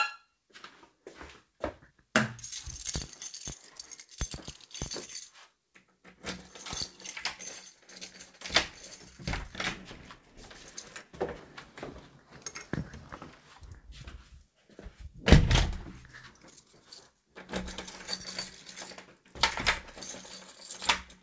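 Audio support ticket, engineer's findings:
No faults found in these everyday sounds; they come over the call path as expected, with nothing above 8 kHz, which fits a wideband call codec such as G.722.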